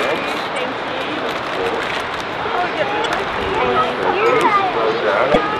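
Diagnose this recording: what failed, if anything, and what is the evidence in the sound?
Damaged data in a compressed stream appears three times, at 0.54–0.58 s, 3.02–3.06 s and 5.32–5.36 s, each a brief chirp or blip about 44 ms long that cuts into the sound. The failure sits at the codec stage: corrupted bytes reach the decoder, which misreads or rejects the affected frames, loses frame sync and scans forward for the next valid header. The garbled output during that resynchronisation is what produces each short burst.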